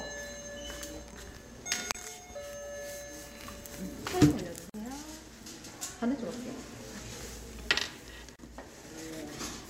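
A recording of everyday sounds, broken by three short silences. These are gaps at a join of encoded pieces: at 1.92 to 1.95 s (28 ms), 4.70 to 4.74 s (47 ms) and 8.36 to 8.39 s (31 ms). Each piece was encoded separately and joined untrimmed, so encoder start delay and end-of-frame padding remain. The edges are smeared by the codec, and the sound resumes where it stopped. Two jumps in the sound occur at 6.50 s and 8.68 s, each skipping around 10 ms with no silence. This is likely a dropped buffer (overrun), where samples were overwritten before being read and the remaining audio was spliced directly.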